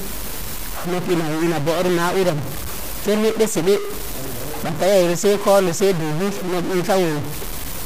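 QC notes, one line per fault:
Throughout, stuck bit: the speech carries a harsh, buzzy distortion that never lets up, and the pauses are filled with a steady noise floor rather than silence. This likely comes from one data bit held at a fixed value by a broken line or converter, so about half of the samples are pushed off by that bit's weight, a step of about -20 dBFS. The quiet samples keep crossing zero, which flips the error's sign and makes the noise in the gaps clearly audible.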